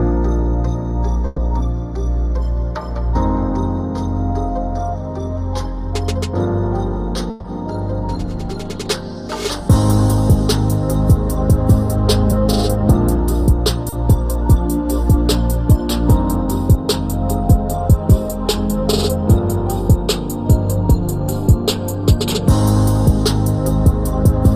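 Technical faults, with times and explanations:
1.26–1.38 s and 7.30–7.45 s, call audio freeze: likely held-up packets emptied the jitter buffer, so the last sound was stretched for 110 and 140 ms, then resumed without loss.
13.89–13.93 s, short stall from a late packet: one packet arrived late, so the receiver held the last sound about 30 ms, giving a brief hold with a slight buzz or dip, nothing missing.
20.91–24.47 s, jitter buffer speed-up: surplus buffered audio was trimmed by cutting short pitch-period pieces, roughly 50 ms in all, running about 1% faster at unchanged pitch.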